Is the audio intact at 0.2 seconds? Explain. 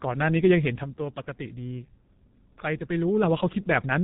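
No. G.723.1 codec damage is present at 0.2 s and runs through the whole clip. The heavy coding at a very low bitrate, likely around 6 kbit/s, removes everything above 3.8 kHz and updates its speech model only every few tens of milliseconds, so the speech sounds muffled and hoarse with smeared consonants.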